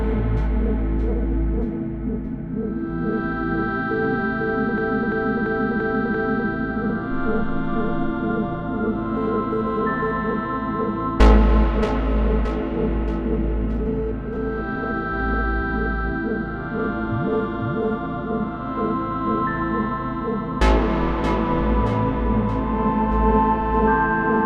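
An everyday sound recording with a system hang loop from 4.78 to 6.49 s: one 341 ms slice repeats exactly five times, a stutter at about 2.9 Hz that fits a 16384-sample ring buffer. Unlike a dropout, essentially nothing is lost.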